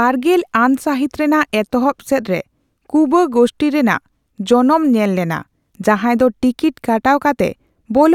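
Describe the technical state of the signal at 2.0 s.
At 2.0 s the speech signal is intact, with no dropout, clipping, distortion or other fault.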